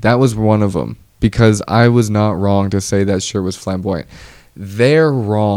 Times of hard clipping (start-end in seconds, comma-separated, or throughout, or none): 0.08-0.52